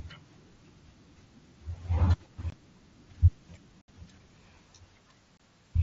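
At 2.50 to 2.53 s, 3.81 to 3.88 s and 5.37 to 5.40 s the speech drops out in unconcealed Bluetooth headset packet loss. Packets between headset and phone went missing and nothing filled the gaps, leaving holes of about 22, 68 and 22 ms with hard, abrupt edges. The longer middle gap fits several consecutive lost packets. Concealed loss would smear or repeat the sound, but these are bare holes, heard through the light graininess of the mSBC link.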